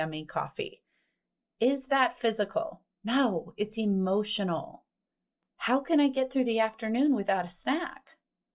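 No technical faults can be heard anywhere in the speech, and the signal holds steady for its whole duration.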